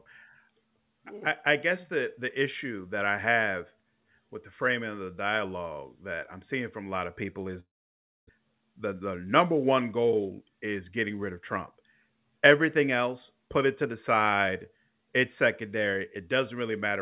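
From 7.6 to 8.4 s the sound breaks off: a brief fading buzz continues the last sound, then about 0.6 s of silence, after which speech resumes with a piece missing. This is likely a long network dropout. On a spectrogram, the smeared concealment decays into a blank gap.

From 8.94 to 9.45 s a jitter buffer speed-up follows: the receiver trimmed pitch periods, removing roughly 70 ms, so speech runs at 110% speed with unchanged pitch and sounds hurried. Harmonics stay level while syllables compress, all below the G.711 path's 4 kHz ceiling.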